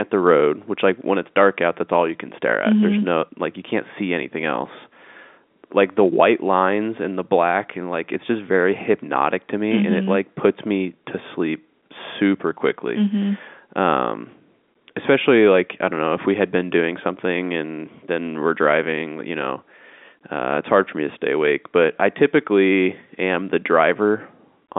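There are no technical faults in this speech to describe.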